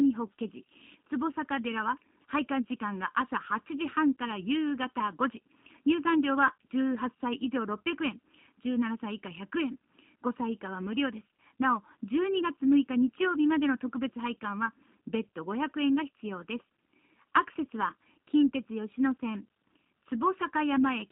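Across the whole speech clip, channel delay (comb filtering) gives the sound a hollow, phasey colour. One channel arrives less than a millisecond after the other, and when the two are summed they cancel at evenly spaced frequencies. The first notch falls around 700 Hz, with further notches at regular steps above it. Unlike a flanger, the notches never sweep. Unlike a narrow room reflection, there is no sense of space, only a fixed filtering of the tone.

From start to end the speech also carries plainly audible damage from the G.729 codec. The band runs from about 200 Hz to 3.7 kHz with nothing above, which fits an 8 kbit/s coder that rebuilds each frame from a vocal tract filter, a pitch predictor and a handful of pulses. The result is a rough, slightly synthetic quality. A simple low-pass or telephone band limit would leave the remaining band clean, but here the retained range itself sounds rebuilt and buzzy.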